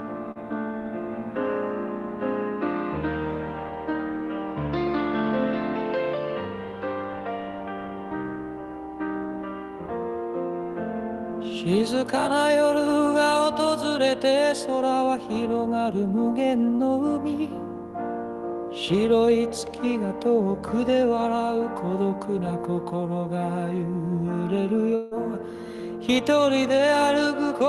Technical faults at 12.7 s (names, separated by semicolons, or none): none